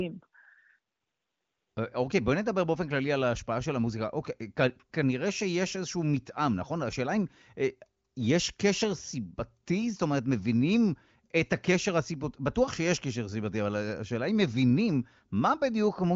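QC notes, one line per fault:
Nothing stood out on listening, with the speech carried over an AMR wideband (HD Voice) path whose top end stops short of about 7.5 kHz.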